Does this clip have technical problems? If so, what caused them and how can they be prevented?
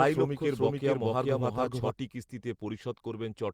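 Yes. From the start to 1.9 s a doubled audio track runs, a full-level copy trailing about 0.4 s behind, likely a second, slower capture path. Monitor one capture route only and mute duplicate inputs.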